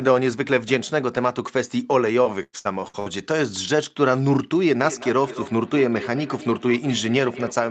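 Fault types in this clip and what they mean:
Repeated packet loss (robotic sound): The network kept dropping or delaying audio packets between 2.23 and 3.08 s. The receiver covered five separate holes by stretching out the last sound it had, filling roughly a third of that stretch, with the longest gap about 99 ms. The speech there turns choppy and synthetic, with fragments missing and a robotic quality. Some of the lost material was rebuilt, around a tenth of a second.
Feedback echo between two devices: From 4.83 s to the end of the clip, a second device in the same room was on the call and replayed this microphone's audio into the air. The microphone captured it again, and no echo canceller on that device could remove sound played by the other device. The speech returns about every fifth of a second, at its loudest about 14 dB below the speech itself, adding a thin, ringing repeat after each phrase.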